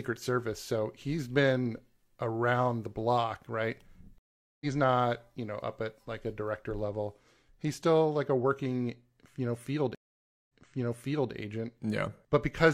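At 4.18 s a stream reconnect cuts the speech. The link dropped and a fresh decoder picked up mid-stream. About 425 ms of silence follows, and speech resumes around a fifth of a second further on. At 9.95 s a second reconnect brings 542 ms of silence. Playback then restarts 836 ms earlier, so a stretch repeats until 11.33 s.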